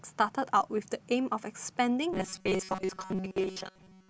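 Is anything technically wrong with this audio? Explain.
Yes. Robotic sound from repeated short buffers, 2.13 s to the end: about 5 ms chunks likely repeat in place of most of the speech, forcing a rigid, metallic 188 Hz buzz.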